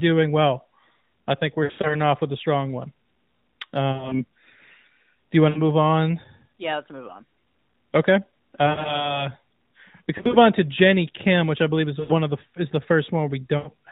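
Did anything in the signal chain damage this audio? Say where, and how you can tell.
Yes. The damage is at the network stage, on the radio link: lost AMR speech frames. Brief warbling, smeared dips occur at 1.64–1.96 s after "I think we're", and at 3.92–4.25 s, 5.50–5.62 s and 8.66–9.16 s. More follow at 10.18–10.37 s before "on to", at 12.00–12.16 s after "which I believe is", and at 13.58–13.69 s. Corrupted frames were discarded. The decoder filled each gap by reusing the last good pitch and vocal tract settings at falling gain. The runs are short, up to about 100 ms, so the sound dips and drags. It then returns rough for a moment. The narrowband AMR codec itself works normally.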